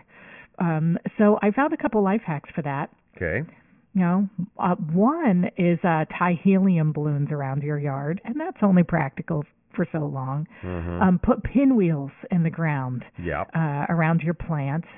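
Nothing technical goes wrong anywhere in this stretch of speech, so there's no fault to point to.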